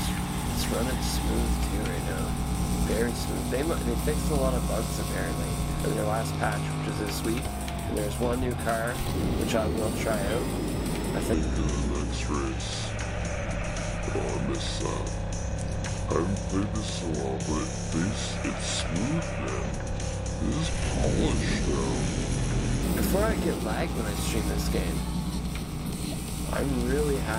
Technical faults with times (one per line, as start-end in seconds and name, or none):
11.34-22.83 section at the wrong speed